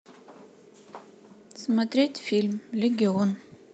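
No technical faults can be heard in this speech.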